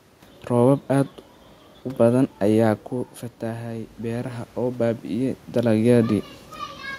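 From 3.39 s to 5.46 s there is automatic gain rising. After the speech level fell by about 9 dB, the gain control slowly added about 5 dB, so voice and room noise swell together. The waveform envelope and noise floor ramp upward, and the spectrogram brightens evenly across all bands.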